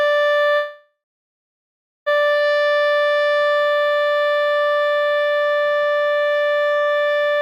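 At 0.55 s a call audio freeze begins, likely from delayed packets emptying the jitter buffer. The last sound stretches into a fading buzz, then silence until 2.08 s, when audio resumes intact but 1.5 s late. A spectrogram shows flat streaks fading to blank; the waveform tapers to a flat line.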